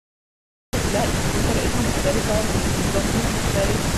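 A speech recording with a cut-off start. The first 0.73 s is digital silence. At 0.73 s the speech appears abruptly, already in progress. There is no natural attack and no fade-in. The sound simply switches on mid-utterance. That points to the recording or stream beginning late. Capture started after the talker had begun, so the opening of the sound was never recorded. What remains begins partway through.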